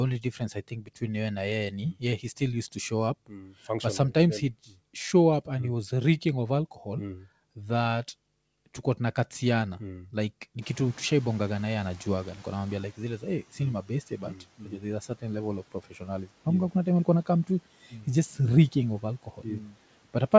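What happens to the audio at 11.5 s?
The noise suppressor is catching up, from 10.61 to 13.19 s, just after "tuko tunakatiana mm like". Room noise jumps by about 24 dB, the suppressor's estimate lags, and the noise passes through with less reduction at first before sinking about 8 dB. It is one steady fade, not pumping tied to speech pauses.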